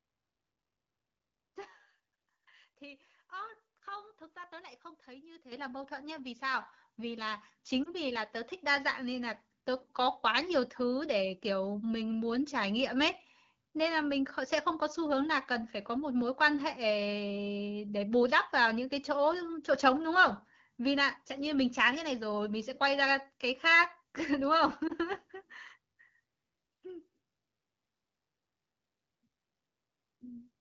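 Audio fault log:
5.52 s and 6.54 s: microphone volume stepped up. Voice and background jump abruptly louder together, first by about 10 dB and then by a further 4 dB or so, because the call software raised the microphone's input volume in discrete steps rather than smoothly.
7.83–7.89 s and 24.87–24.92 s: lost AMR speech frames. Each is a brief dip or warble of about 50 ms, which fits a single dropped 20 ms frame. The AMR-WB decoder, running at 12.65 kbit/s, bridged each gap by reusing the last good frame's settings with falling gain.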